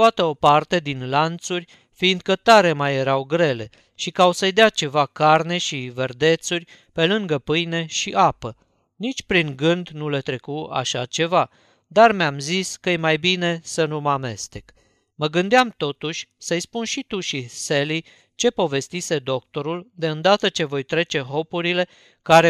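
No technical faults can be heard in the speech at any point.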